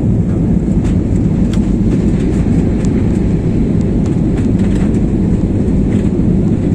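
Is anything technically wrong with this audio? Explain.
No, nothing technically wrong stands out here; it all sounds just as it should.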